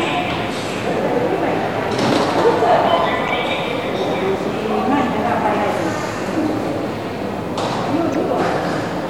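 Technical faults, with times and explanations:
3.28–3.30 s and 8.13–8.16 s, damaged data in a compressed stream: two brief blips where corrupted bytes in the compressed audio threw the decoder off. It misread those frames and lost sync before locking onto the next valid frame header.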